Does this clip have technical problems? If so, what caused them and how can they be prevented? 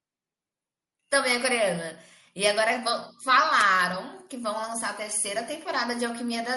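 Yes, watery, swirling treble runs through the whole speech clip, likely MP3 compression at a starved rate fitting 64 kbps. Unlike a plain low-pass filter, faint detail flickers on and off. Encoding at a higher bitrate prevents it.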